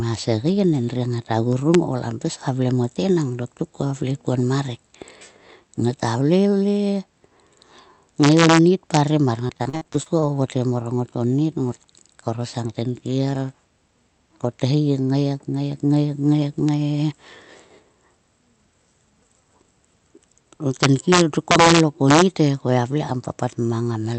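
Speech clip that went through an Opus call path, band-limited to around 8 kHz, with two kinds of fault on top. The integer overflow shows up as harsh cracks where loud peaks wrap to the opposite sign instead of being limited: at 1.74 s, just before "kam pis ka vle", then 8.23–8.59 s, 8.94–8.97 s, 16.69 s, and worst at 20.83–22.22 s, with peaks driven about 1 to 5 dB past the integer limit. Between 9.47 and 10.24 s, just before "vovotgem mor", there's repeated packet loss that gives a choppy, robotic sound. There are about nine short holes, none longer than 40 ms, each patched by stretching the previous sound, so roughly 30% of that span is filler.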